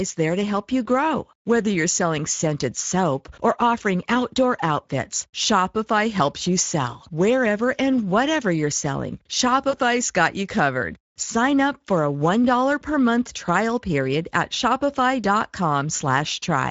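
Throughout, the speech carries plainly audible Speex codec damage: a hoarse, noisy CELP texture, consistent with about a 16.8 kbps setting, rather than the smeared, watery quality of transform codecs. From 9.69 to 9.76 s, after "and whatever you're selling" and before "got you covered", VoIP packet loss concealed by the speech codec stretches the voice into a fading buzzy tone or coloured noise. That fits two lost 20 ms frames, not a hard dropout to silence.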